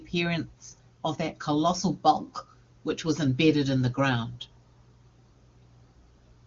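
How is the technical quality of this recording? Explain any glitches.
No faults or glitches are audible.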